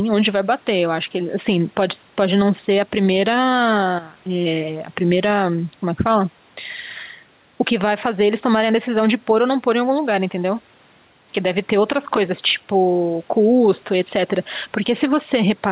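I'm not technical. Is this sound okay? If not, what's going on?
No, not quite. The clip has gain pumping from start to finish. This gives the sound a gentle breathing, squashed feel. The likely cause is a microphone level set too high, with an automatic limiter pulling it back down on every loud moment. The swings are modest. The dull, narrow tone comes from the phone-call line, which removes everything above 4 kHz.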